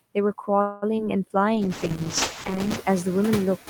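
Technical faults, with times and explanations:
Throughout: noise suppressor artifacts. The suppressor pulls steady background noise down by about 14 dB, gating it frame by frame, so the floor dips in pauses and swells back under the speech. The room noise rises by about 12 dB around 1.5 s.
0.61 to 0.84 s: call audio freeze. The last sound is stretched into a fading buzz for roughly 0.21 s, after which speech resumes exactly where it stopped. Nothing is lost, but everything afterwards plays 0.21 s late, likely because delayed packets drained the jitter buffer.
0.96 s and 1.05 to 1.08 s: short concealed packet loss. At each point about 20 ms of audio failed to reach the decoder, and the receiver extrapolated from the preceding sound before crossfading back. The result is a brief smear or wobble, and the second repair also pulls playout slightly earlier.
1.56 to 2.84 s: call bitrate drop. 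The encoder falls from 32 to 8 kbps and stays at that floor for about 1.2 s. With so few bits, Opus quantises coarsely and trims the upper band, so speech turns muffled and watery until the rate recovers.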